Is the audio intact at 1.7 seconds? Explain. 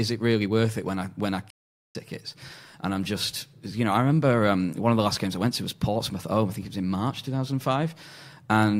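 No. At 1.7 seconds the speech sits inside a stretch of AAC frame loss with muting running from 1.50 to 1.96 s, about 0.45 s long, which fits a run of roughly twenty lost frames, just after "when I when I". The decoder zeroed the missing spectra, so the overlapping windows fade the sound down and back up, leaving a soft-edged hole. A spectrogram shows a blank vertical band across all frequencies, and the waveform tapers to flat silence.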